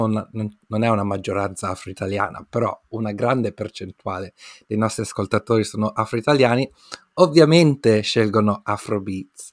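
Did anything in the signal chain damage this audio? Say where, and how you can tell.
No, nothing in the chain seems to have hurt this speech recording, and there's nothing at any stage worth flagging.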